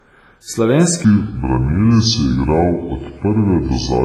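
From the start, the speech has a washy, ringing quality with hiss that swells and fades with it. This is likely WMA compression at a low bitrate, around 24 kbps.

At 1.05 s a section at the wrong speed begins and runs to the end. Playback drops to 0.673 times normal, likely from a clock mismatch, so the speech turns slow and deep, roughly seven semitones lower.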